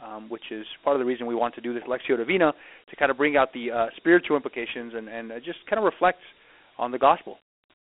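Dialogic VOX ADPCM throughout: coarse 4-bit adaptive coding, fitting 32 kbps, leaves plainly audible gritty hiss on the speech and nothing above 3.8 kHz.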